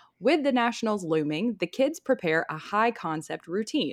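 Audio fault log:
Nothing in this speech recording calls for a fault entry. The log for it stays empty.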